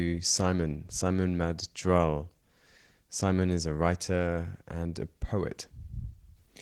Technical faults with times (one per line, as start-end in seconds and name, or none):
0.00-6.62 Opus voice compression